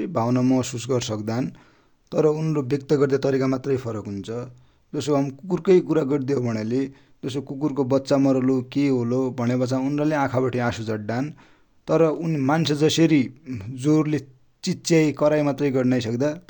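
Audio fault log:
No faults are audible anywhere in this speech clip.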